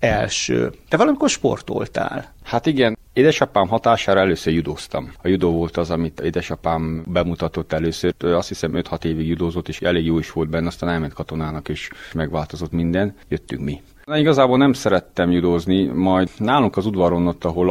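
No technical faults can be heard in this audio, so there are none to describe in time order.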